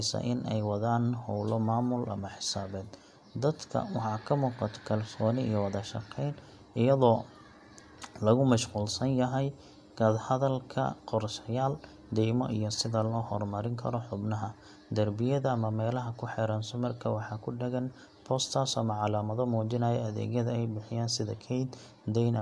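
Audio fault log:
No audible faults found.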